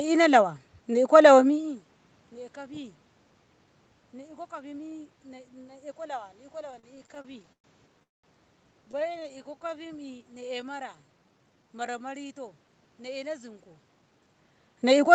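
From 6.71 to 8.03 s the speech drags and catches in repeated stalls (stutter): 14 short gaps, the longest 115 ms, are bridged by stretching the last sound, about a quarter of that stretch. Packets were arriving late, so the jitter buffer kept running dry, but nothing is lost.

At 8.03 s the sound halts for about 205 ms, almost all of it (190 ms) silent, before picking up exactly where it stopped. This call audio freeze was likely caused by packets held up in transit, which emptied the buffer and inserted a gap.

A second bout of repeated stalls (stutter) runs from 8.91 to 9.87 s. It has 17 very brief hitches, none longer than 18 ms, together covering about 170 ms. The receiver is again filling for late packets.

Overlapping that, from 9.43 to 12.29 s, the speech slows to about 87% of its pace while keeping its pitch. Sounds are drawn out. This is jitter buffer slow-down: the receiver repeated single pitch periods to rebuild its reserve, adding about 380 ms.

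From 13.88 to 15.07 s the opposite jitter buffer speed-up occurs. The speech hurries at about 111% of its pace with unchanged pitch. The buffer had overfilled, so the receiver trimmed roughly 150 ms in tiny pitch-period slices to cut the delay.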